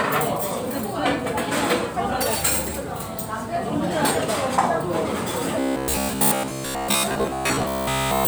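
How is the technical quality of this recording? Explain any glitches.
The recording has one glitch in its final stretch. From 5.60 s to the end, there is robotic sound from repeated short buffers. New audio likely arrived too slowly, so playback looped a fragment of about 15 ms for most of that time while the real audio was skipped. The looping locks in a rigid 66.7 Hz metallic buzz that only loosely tracks the underlying sound.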